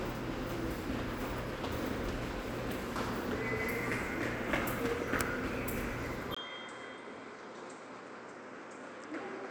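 At 6.35 s the sound cuts out for about 20 ms, then returns duller and quieter until the end. Nothing above 8.6 kHz remains, the level falls by about 10 dB, and a faint new noise floor appears. This is likely an input switched to a poorer device.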